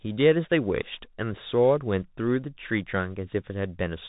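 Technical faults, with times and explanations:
Throughout, Bluetooth CVSD headset codec: the speech sounds boxed-in and phone-like, with nothing getting through above 4 kHz, and the codec damage is plainly audible. CVSD sends just one bit per sample saying up or down, nudging an adaptive step, which fits the standard 64 kbps headset link. That coarse tracking leaves a grainy hiss under the speech, roughens the s sounds, and smears fast, loud high detail where the step can't keep up.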